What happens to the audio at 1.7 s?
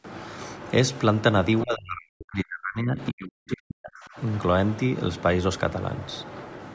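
The echo canceller likely mistook the talker for loudspeaker echo while both sides spoke at once, giving speech suppressed in double talk from 1.63 to 4.17 s. The speech dips sharply, at worst by about 40 dB, and drops out in pieces for roughly two seconds overall.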